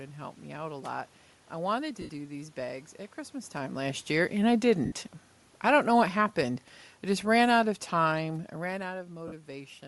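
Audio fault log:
throughout  Bluetooth LC3 compression: the speech has a plainly audible grainy, breathy edge, likely from LC3 coding at around 48 kbps. The spectrogram shows speckled, noise-like texture in place of clean upper harmonics.
2.01–2.09 s, 4.85–4.92 s, 9.28–9.32 s  lost LE Audio frames: there are gaps of 75, 67.5 and 45 ms. The first comes after "a lot I wanted" and before "these bags at", and the second after "last year and I". The decoder repeated the last spectrum with random signs, so each gap is a noisy smear that fades, which fits 7.5 ms frames. The spectrogram shows blurred vertical patches, and the waveform shows a brief, fading, shapeless stretch.
5.51–8.89 s  automatic gain falling: the gain control lowered its gain by about 5 dB over more than three seconds. Speech and room noise sink together, and the waveform envelope tapers steadily lower across that span.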